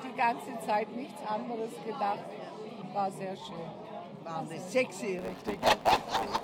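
Near the end, from 5.18 s onward, the audio picks up a block size mismatch (truncated): one stage hands over longer blocks than the next reads, so each block's tail gets dropped. You hear a 109 Hz buzz at that block rate, and everything runs about 1.09 times fast while the timbre stays put.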